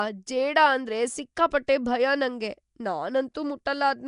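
All the way through, the speech has a rough, hissy halo and a smeared, underwater feel with nothing above 10.6 kHz, most likely Nellymoser compression quantising each block coarsely and filling weak bands with noise. At 3.34 s there's a pre-echo: about 10 ms of hiss creeps in ahead of a sharp attack, because the coding noise spreads across the block and softens the onset.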